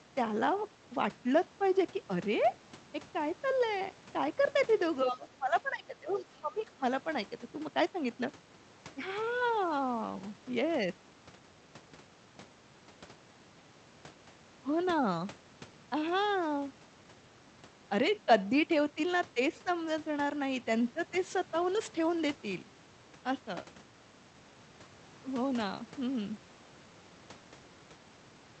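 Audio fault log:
5.04–6.83 s, speech suppressed in double talk: The speech dips by up to about 15 dB, about one and a half seconds affected in all, likely because the echo canceller could not separate the talker from loudspeaker echo while both sides spoke at once.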